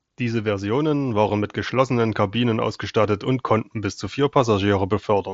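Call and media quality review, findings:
Concealed Bluetooth headset packet loss at 1.29 s, before "mit geschlossenen": one lost packet, about 7.5 ms, patched with copied waveform from the preceding cycle. Nearly inaudible; waveform shows repeated cycle, spectrogram a faint smear. mSBC path caps band at 8 kHz.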